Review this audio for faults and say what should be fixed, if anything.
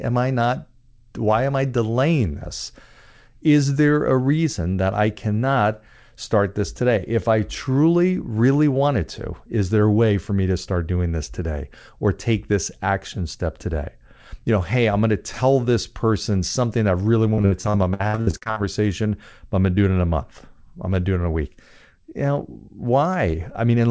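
Choppy, robotic speech runs from 17.34 to 18.58 s, right after "person something I really". This is repeated packet loss (robotic sound): about a dozen gaps, the longest 64 ms, were each patched by extending the previous sound, so roughly 40% of the stretch is concealed. Adding forward error correction and a larger jitter buffer would prevent it.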